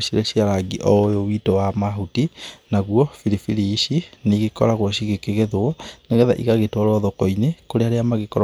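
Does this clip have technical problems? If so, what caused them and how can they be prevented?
No, nothing stood out as a technical problem on listening to this speech, so there is no cause to trace or prevent.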